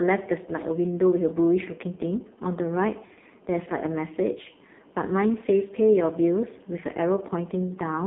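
Throughout, the speech carries heavy AMR narrowband mobile codec damage: nothing above 3.6 kHz, thin lows below 200 Hz, and a buzzy, synthetic quality from pulse-driven vocal-tract modelling, which fits a low rate near 5.15 kbps. Simple band-limiting would sound muffled but still natural.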